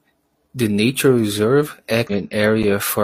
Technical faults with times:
2.07-2.12 damaged data in a compressed stream

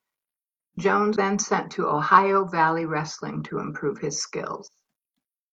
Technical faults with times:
1.12-1.17 damaged data in a compressed stream

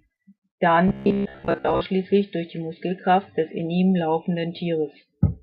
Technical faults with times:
0.88-1.82 robotic sound from repeated short buffers

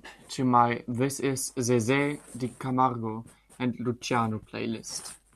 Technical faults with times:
none

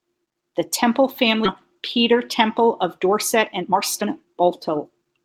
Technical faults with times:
1.45-1.47 skip ahead
1.75-5.21 jitter buffer speed-up

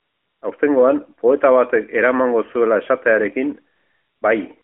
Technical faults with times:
0.00-0.42 AMR comfort noise
3.76-4.22 AMR comfort noise
4.62 AMR comfort noise

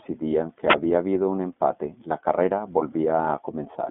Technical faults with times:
0.00-3.90 iLBC codec
0.68-0.76 wireless microphone noise hit
1.68-1.71 lost iLBC frames

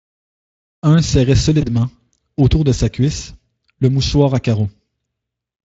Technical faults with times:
1.61-1.70 VoIP packet loss concealed by the speech codec

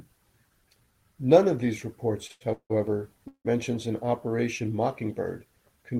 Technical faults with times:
2.27-2.43 short stall from a late packet
2.53-2.72 call audio freeze
3.28-3.47 call audio freeze

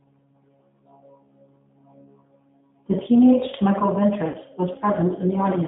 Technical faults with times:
0.00-5.67 G.729 codec
4.28-4.37 VoIP packet loss concealed by the speech codec

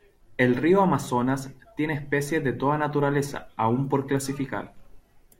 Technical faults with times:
none

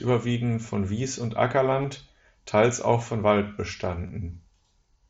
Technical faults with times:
0.34 concealed Bluetooth headset packet loss
1.82-1.84 concealed Bluetooth headset packet loss
4.07-4.09 concealed Bluetooth headset packet loss

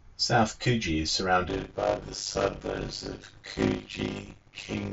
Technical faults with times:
0.63 concealed Bluetooth headset packet loss
1.48-4.93 block size mismatch (padded)

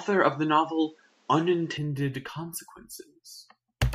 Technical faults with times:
0.00-1.77 input switched to a poorer device

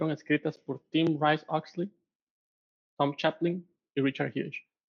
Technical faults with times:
none

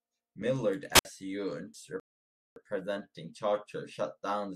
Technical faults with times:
0.93-1.05 wireless microphone squelch dropout
2.00-2.56 rebuffering stall

